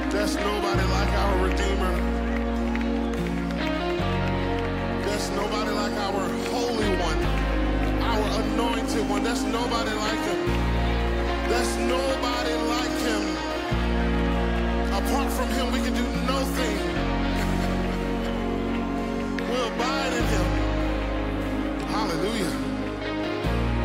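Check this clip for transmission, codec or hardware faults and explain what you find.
No transmission, codec or hardware faults can be heard anywhere in the signal.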